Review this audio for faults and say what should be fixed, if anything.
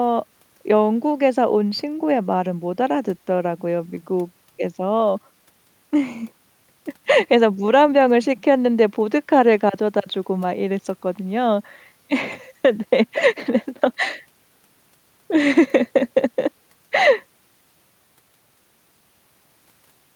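Nothing should be fixed, since no faults turn up anywhere in the audio.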